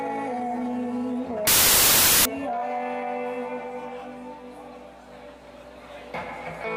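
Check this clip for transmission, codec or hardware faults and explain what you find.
One fault: from 1.47 to 2.25 s the samples are built from the wrong bytes. The reader assembles each sample with its bytes misordered or shifted by one, so the rapidly varying low-order bits land in the high-order position and dominate every value. The result is a burst of loud, harsh broadband noise, close to white on loud passages. A spectrogram shows a flat, full-band wash across that span; the waveform jumps to dense hash.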